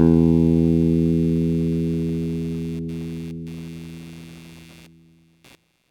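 Everyday sounds carry computer activity noise from start to finish: a buzzing, pulsing chirp at around 150 Hz, roughly 30 dB under the sound. Unlike steady mains hum, it flickers with processor or graphics load shifting the shared audio ground, not with the sound itself.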